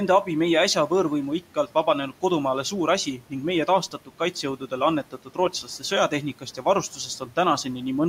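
From 3.91 to 4.2 s, just after "ning meie", and again from 5.11 to 5.83 s, there is speech cut by the noise suppressor. The suppressor mistook quiet parts of the speech for the room noise sitting about 24 dB below it and pulled them down by up to about 12 dB. Roughly a tenth of a second is affected in the first event and a fifth in the second. Those sounds come out swallowed and faint. On a spectrogram, the soft consonant energy thins into gaps, and the waveform shows brief dips.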